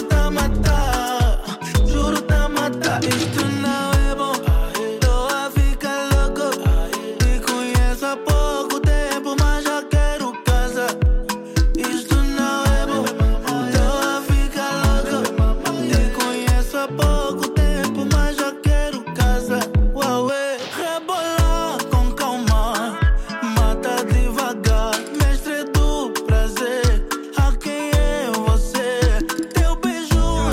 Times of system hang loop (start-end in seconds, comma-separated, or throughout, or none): none